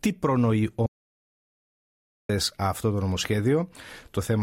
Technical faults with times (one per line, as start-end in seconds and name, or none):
0.86-2.29 audio dropout to silence